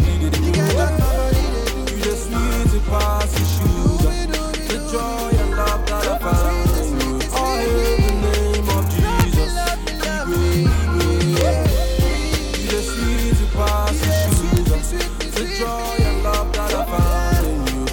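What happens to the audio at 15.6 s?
Nothing goes wrong at 15.6 s; the audio carries on intact through that moment with no audible fault.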